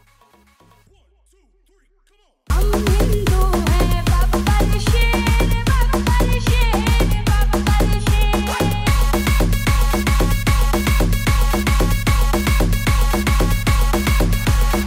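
The wanted signal was likely lost upstream while the path after the break stayed live, so the clip opens in an audio dropout to a faint residue that is already under way at 0 s. Until 2.5 s only a faint trace of the sound gets through, about 35 dB below its normal level, faint rather than silent. At 2.5 s the full signal returns abruptly, with no fade, which sets this apart from a natural pause.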